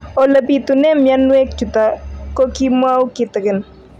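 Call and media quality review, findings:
Hard clipping, 0.18–1.39 s (about 3 dB over), 1.79–1.86 s, 2.40–2.44 s, 2.83–3.02 s (about 1–2 dB): speech peaks exceed a stage's ceiling, flattened tops give crackle on peaks.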